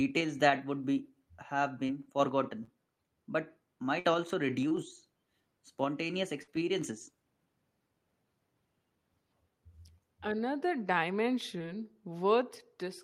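Short concealed packet loss at 1.87–1.91 s, 2.65–2.69 s and 4.68–4.72 s: about 20 ms never arrived and was bridged by extending the preceding sound, heard as a brief smear or wobble. On a spectrogram the harmonics run briefly flat and blurred.

A burst of packet loss at 3.99–4.06 s drops about 60 ms. The receiver carries the last sound forward for about 50 ms while fading it, producing a held buzz or dying hiss before the audio jumps ahead. The spectrogram shows frozen, fading bands. The waveform shows a decaying envelope and then a discontinuity.

Short concealed packet loss at 4.68–4.72 s repeats the brief smear.

A second burst of packet loss at 6.42–6.50 s has the same roughly 60 ms gap and fading held sound.

A final short concealed packet loss at 11.58–11.63 s replaces about 20 ms and stretches the timing by around 10 ms.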